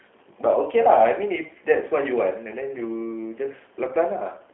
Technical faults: G.729 codec

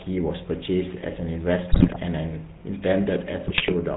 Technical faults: GSM full-rate codec; GSM bit errors

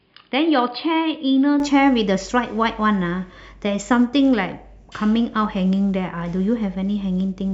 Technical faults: input switched to a poorer device

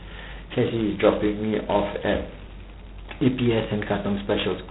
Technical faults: G.726 ADPCM

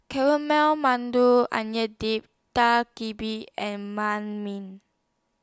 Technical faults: none

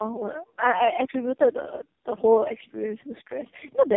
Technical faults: tandem speech coding

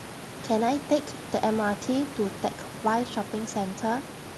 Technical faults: none

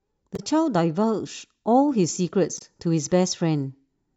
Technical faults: damaged data in a compressed stream

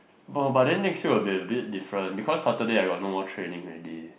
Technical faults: none

